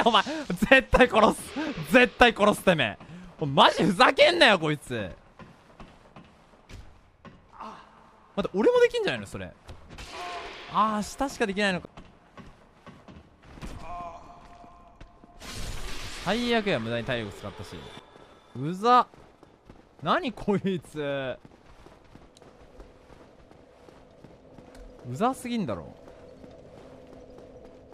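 Two CD skips, at 11.85 s and 17.99 s: the laser jumps tracks, a very short mute of roughly 10 ms then a few milliseconds, and playback resumes elsewhere.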